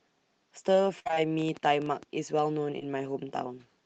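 From 0.99 to 1.26 s the speech turns choppy and robotic: repeated packet loss (robotic sound), four gaps close together, the longest 59 ms, with more than half that stretch filled by stretched-out copies of the preceding sound. Unlike a single dropout, the choppy texture keeps returning.

Between 1.39 and 2.40 s a train of clicks ticks over the audio, about ten sharp pops at roughly nine per second, spaced unevenly and peaking about 5 dB above the speech. They likely come from electrical interference or a faulty connection. Unlike the packet loss, they add similar transients rather than smearing or removing sound.

At 2.79 to 2.83 s there is a short concealed packet loss. About 20 ms is missing and patched from the preceding sound, heard as a brief smear or wobble. It is a single isolated event, not the rapid, repeating robotic pattern heard earlier.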